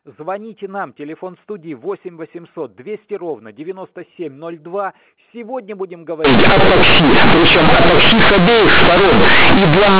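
From 6.25 s to the end, companded audio is read as linear. Unexpanded mu-law bytes become loud, buzzy distortion with heavy noise in pauses.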